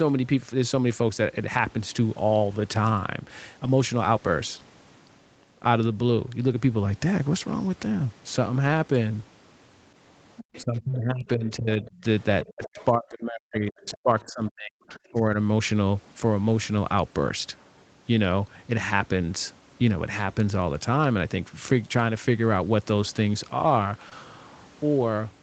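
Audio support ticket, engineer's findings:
Lost packet rebuilt from error correction: 8.63–8.69 s, about 40 ms (fits two packets); 24.11–24.13 s, 20 ms. No gap, just rougher, noisier frames. Opus in-band FEC copy played instead of silence or smear.

Other side's voice leaking through: 10.37–10.64, 12.43–12.85, 13.88–13.97, 14.20–14.30, 14.94–14.99 s. Faint second talker, about 20 dB below speech, fading lower by 14 s. Likely residual loudspeaker echo not removed by the echo canceller.

Speech suppressed in double talk: 10.62–12.04, 12.45–14.90, 15.06–15.36 s. Near talker dips, deepest around 40 dB in the 12.45–14.90 s stretch. It overlaps the leaked voice, unlike a packet loss. Likely the echo canceller ducking both sides during double talk.

Short concealed packet loss: 24.09–24.13 s. Brief smear where about 20 ms went missing, extrapolated from preceding sound. Band tops out near 8 kHz throughout, as expected for this call path.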